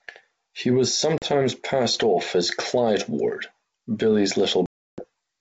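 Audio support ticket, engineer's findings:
Packet loss on an ADPCM call, 1.18–1.26 s: hard-edged silent gap, about 40 ms of audio lost, just before "passed off as". Return comes back slightly distorted, settling over tens of milliseconds. The gap fits a couple of lost packets.

Second hole, 4.66–5.05 s: about 320 ms lost, which points to around fifteen packets. Same abrupt edges and disturbed re-entry.

Mechanism: the decoder's adaptive predictor and step size drift out of step with the sender's across the hole. A plain dropout on uncompressed PCM would resume cleanly. The lossy re-entry here marks ADPCM state mismatch. The 64 kbit/s G.722 wideband path otherwise works normally, with at most faint coding damage.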